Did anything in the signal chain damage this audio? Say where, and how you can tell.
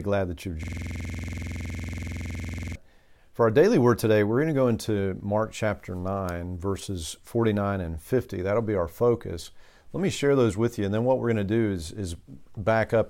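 Yes, a system hang loop in the driver buffer. From 0.63 to 2.76 s, after "glad that you've", one 46 ms slice repeats at 21.5 Hz, showing identical waveform cycles and evenly spaced stripes on a spectrogram.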